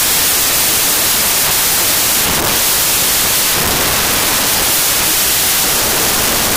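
Throughout the audio, the data have a wrong sample width: they appear to have been written as 16-bit integers but read back as packed 24-bit integers. Each decoded value is therefore built from bytes belonging to different original samples, and only some keep the real signal's top bits. The result is loud, harsh noise with the original sound buried underneath, playing 1.5 times too fast and pitched up to match.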